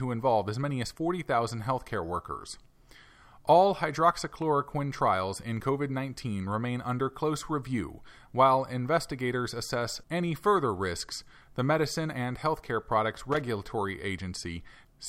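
Loose connector crackle appears from 13.32 to 13.42 s, a brief irregular burst of scratchy crackle over the speech. A worn or dirty contact is making and breaking in quick succession, chopping the signal on and off for roughly a tenth of a second.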